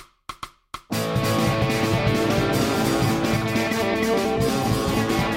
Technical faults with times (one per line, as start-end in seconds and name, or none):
0.00-5.36 doubled audio track